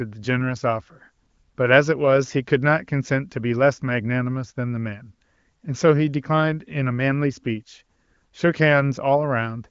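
No technical fault can be heard in this speech clip, which carries the band-limited character of the AMR wideband (HD Voice) codec, with nothing above 7.4 kHz and at most faint coding damage, consistent with the codec running near its top rate of about 23 kbit/s.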